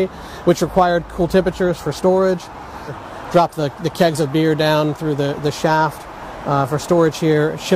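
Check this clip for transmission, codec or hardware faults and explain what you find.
Nothing stands out as a problem here; I listened through and didn't catch anything worth flagging.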